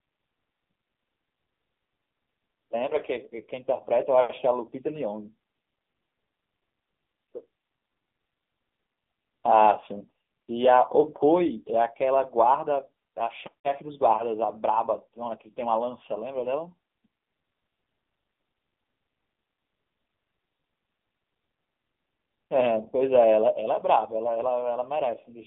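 AMR narrowband mobile codec damage runs through the whole recording. The speech has passed through a narrowband phone path. The signal is confined to roughly 200 Hz to 3.6 kHz, and nothing above 3.6 kHz survives, so sibilants and air are gone and the sound is thin and boxy. The codec models the vocal tract from a sparse pulse excitation in short frames. The damage is heavy, giving a buzzy, synthetic edge that fits a low bitrate around 6.7 kbps.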